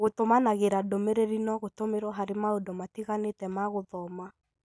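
No audible faults in the recording.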